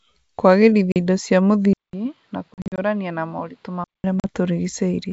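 A speech recording carried over a G.722 wideband call, where the upper band reaches well past 5 kHz when the line is healthy, shows two kinds of fault. Hard-edged dropouts cut the sound at 0.92 to 0.97 s and 4.20 to 4.26 s, each a 40 ms hole, and again as a scattered burst from 2.54 to 2.79 s, where 140 ms goes missing across 240 ms in gaps of up to 40 ms. After each gap the speech comes back briefly slightly distorted before settling. This is packet loss on an ADPCM call: a couple of packets are lost in the short gaps and several in the burst, all replaced by silence. The receiving decoder's predictor and step size then drift out of step with the sender's and take some tens of milliseconds to catch up. From 1.73 s to 4.04 s the sound abruptly turns duller and about 10 dB quieter, with nothing above 5.4 kHz and a new noise floor roughly 35 dB below the speech, and a 200 ms silence marks the changeover. 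This is likely an input switched to a poorer device, a narrower-band microphone or headset profile that brings its own band limit, level and background noise.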